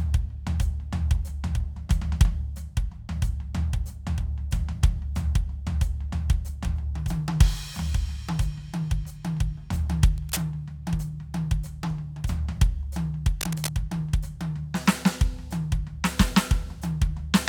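At 10.18 to 10.42 s and again at 13.41 to 13.69 s, there's cable scratch noise, a rough rustling burst roughly 10 dB under the music, likely from a worn, shifting connector.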